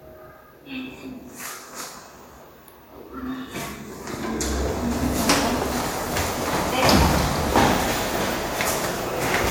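Nothing in these everyday sounds stood out as a fault on listening.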